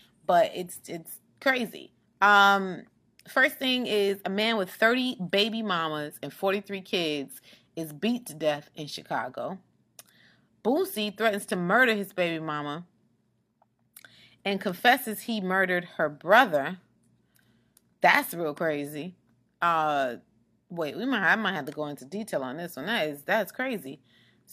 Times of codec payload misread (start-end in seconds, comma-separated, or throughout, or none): none